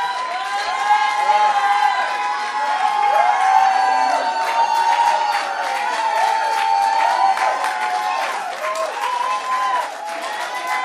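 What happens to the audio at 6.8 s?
Nothing goes wrong at 6.8 s; the audio plays straight through that moment with no dropout, click, glitch or other fault.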